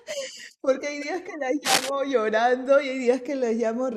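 From 1.64 to 1.89 s, cable scratch noise rasps over the speech at roughly its loudness. A worn connector or cable being moved is the likely cause.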